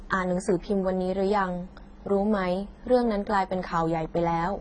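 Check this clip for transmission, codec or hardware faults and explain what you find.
Throughout the speech the sound is dull and smeared, with a watery, fizzy texture on sibilants and nothing above 9.5 kHz. This is likely heavy AAC compression. The codec discards high bands and coarsely quantises the rest, which points to a very low bitrate around 16 kbps.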